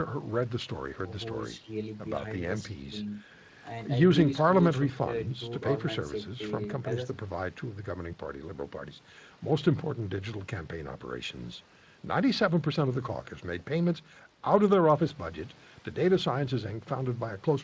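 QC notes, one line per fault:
Nothing faulty heard anywhere in this speech recording.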